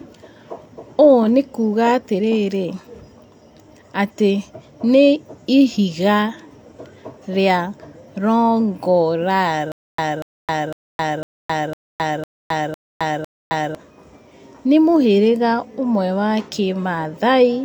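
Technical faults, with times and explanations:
9.72 to 13.75 s, stutter with silent gaps: the playback likely stalled and kept retrying, each time replaying the last fragment before running dry. A burst of about 0.24 s returns eight times, every 0.5 s, separated by roughly 0.27 s of digital silence, and the speech that should fill that span is lost.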